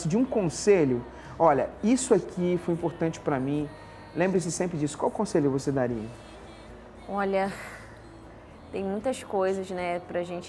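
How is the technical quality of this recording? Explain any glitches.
Listening closely, nothing in the recording stood out as a technical problem or glitch.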